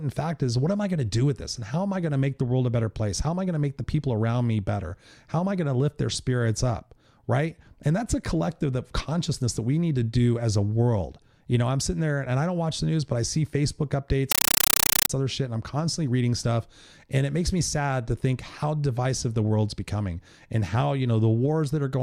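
From 14.32 s to 15.10 s the speech is replaced by a compressed stream played as audio. An AC-3 (Dolby Digital) bitstream reached the output as if it were ordinary PCM samples, with no decoding. Each data frame plays as an 8 ms burst of noise followed by silent padding, repeating 31.25 times a second. For about 0.78 s this produces very loud, harsh chattering static. The burst rate fits AC-3 framing at 48 kHz.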